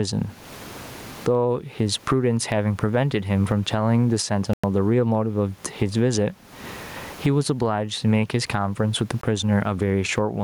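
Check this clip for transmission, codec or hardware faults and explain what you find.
Two kinds of fault are audible: gain pumping throughout, and two short Bluetooth dropouts.

Gain pumping runs through the whole speech clip. The input gain is set far too high and a fast limiter likely clamps each loud syllable, swinging the level by roughly 25 dB. The room noise sits about 40 dB below speech.

Bluetooth dropouts occur at 4.53 to 4.64 s and at 9.21 to 9.24 s. Packets likely failed to reach the headphones in time, so the output cuts to silence for about 100 ms, then for about 20 ms. The gaps fit roughly five lost packets and one lost packet, and the speech resumes further on, as if it had kept playing.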